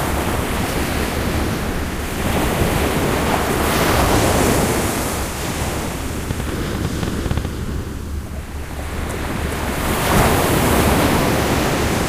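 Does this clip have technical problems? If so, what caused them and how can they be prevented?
Yes. A train of clicks runs from 6.31 to 7.46 s. It is about ten similar pulses at roughly 8.8 per second, unevenly spaced, standing around 10 dB above the sound. The likely cause is interference from nearby equipment, a faulty connection or an unsteady power supply injecting repeated pulses into the signal path. To prevent it, secure and check all cables, use a clean power source, and keep the recording chain away from other electronics.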